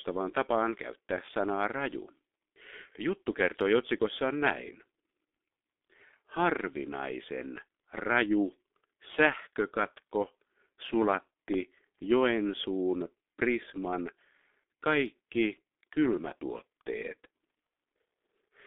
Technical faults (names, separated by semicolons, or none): G.723.1 codec